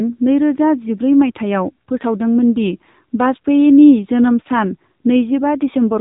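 From start to finish the speech carries AMR narrowband mobile codec damage. Nothing passes above about 3.8 kHz, and the voice sounds plainly buzzy and synthetic, consistent with a low mode near 7.4 kbps. That buzz sets it apart from simple telephone band-limiting.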